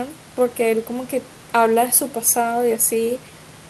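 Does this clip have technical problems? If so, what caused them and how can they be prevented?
No, the speech signal shows no technical problems, with only the room's own background noise sitting about 22 dB below the voice as part of the recording.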